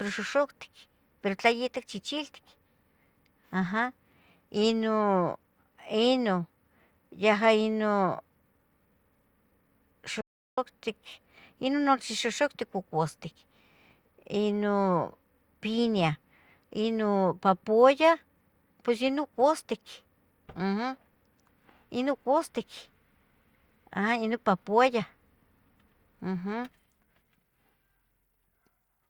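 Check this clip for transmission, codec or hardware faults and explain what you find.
There is one fault, an audio dropout to silence, from 10.21 to 10.58 s. For about 0.37 s the speech cuts off and the signal falls to silence. The likely cause is a brief loss of input while recording continued. Unlike a natural pause, no room tone remains, so the gap sounds dead rather than quiet.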